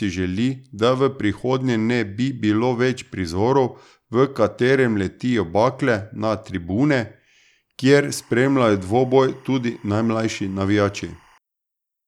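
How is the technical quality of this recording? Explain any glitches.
The recording has one glitch, timecode bleed. From 8.11 to 11.38 s, linear timecode leaks in from a neighbouring line, chirping between roughly 1 and 2 kHz, well below the speech, with a cadence that fits 24-frame code.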